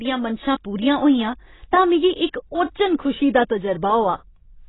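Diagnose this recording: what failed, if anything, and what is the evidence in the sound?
The failure is at the codec stage. Throughout the speech, nothing sounds above 3.9 kHz. The sound is dull and smeared, with a warbling texture. This is likely AAC compression. Heavy AAC-LC quantisation at a rate fitting about 16 kbps cut the top band.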